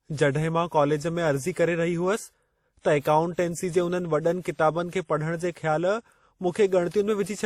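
Transcoding between lossy codecs, likely a WMA encode near 48 kbit/s re-encoded as Opus, affects this whole speech recording. Opus spends bits re-coding WMA's artefacts, so both codecs' artefacts are heard layered together, with nothing above 20.1 kHz.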